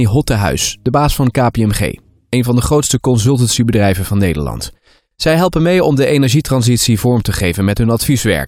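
No technical faults can be heard anywhere in the recording, with the signal level, continuity and timing holding steady throughout.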